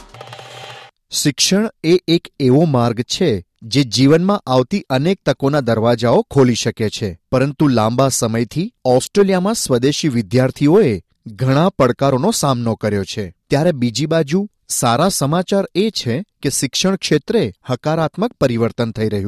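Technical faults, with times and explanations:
No technical faults can be heard anywhere in the clip.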